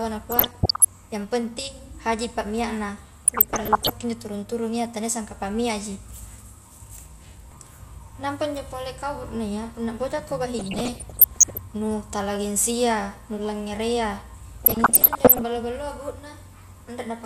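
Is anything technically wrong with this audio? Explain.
Yes, there are two faults.

MP2 compression: The whole speech track sounds dull and carries a gurgling, granular roughness, likely from MPEG Layer II coding at a low rate, with the dullness pointing to a stream near 80 kbps. The coder splits the signal into 32 sub-bands and shares out too few bits, so upper bands drop out and the remaining ones are coarsely quantised. Unlike burbling, this damage is steady and constant rather than arriving in bursts.

DAB burbling: Bursts of burbling occur at 0.30–0.89 s (ending just before "yang penting"), 3.25–3.90 s, 10.59–11.58 s (ending just before "n tala gensia") and 14.59–15.41 s. Bit errors get past error correction into the MP2 data, around 1 percent here, so wrong samples put short blips of noise in single sub-bands and wrong scale factors make sub-bands jump in level for up to a frame. 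These bursts come and go with reception, which separates them from the constant dullness of the coding.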